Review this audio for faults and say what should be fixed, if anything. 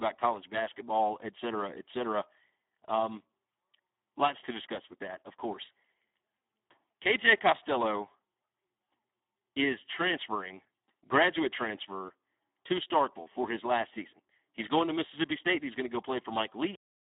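Speex codec damage runs throughout: heavy CELP artefacts leave the speech hoarse and robotic, band-limited to 300 Hz–3.7 kHz, which fits a low setting near 8 kbps. Encode at a higher Speex quality, or use a wideband codec.

A cut-off end occurs at 16.75 s: the speech stops mid-sound and drops straight to digital silence, as if the final buffers were never written. Flush and write all remaining buffers before closing the stream.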